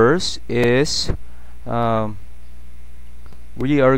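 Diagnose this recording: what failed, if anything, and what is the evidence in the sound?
No fault detected in this recording.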